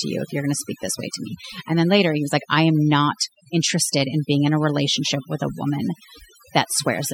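A speech recording with overdone noise removal running from start to finish. The noise reduction was pushed so hard that any frequency band close to its noise estimate gets pulled down or switched off, taking the quieter parts of the voice with it. The background falls to near silence dotted with twinkling specks. On a spectrogram the pauses show as an almost empty floor with scattered isolated dots, and the speech has ragged, gappy harmonics.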